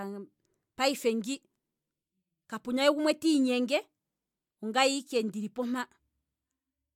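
No faults are audible anywhere in this recording.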